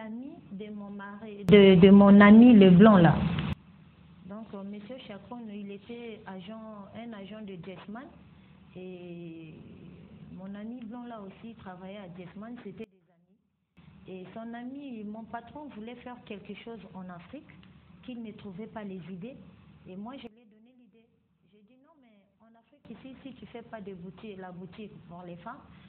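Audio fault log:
1.49–3.53 s, sudden gain jump: a digital gain setting was likely applied without a ramp, lifting everything about 24 dB at once, so sound and background noise leap together.
12.84–13.77 s, sudden gain jump: likely the same unramped change, cutting level about 24 dB, drops sound and noise abruptly.
20.27–22.85 s, sudden gain jump: a further, likely unsmoothed step of about −18 dB pulls sound and noise down together.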